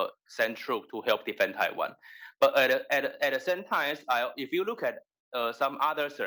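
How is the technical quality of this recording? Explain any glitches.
The quality is compromised by one fault that runs the whole length. Crude rate conversion is present from start to finish. The error pattern fits a 32 kHz source raised to 48 kHz by repeating the nearest sample, a 3:2 ratio. Some samples are duplicated in a fixed cycle, with no smoothing filter. That regular stepping creates shifted, inharmonic copies of the sound itself. The result is a gritty, inharmonic fizz that tracks loud and bright passages, sitting roughly 25 dB below the signal.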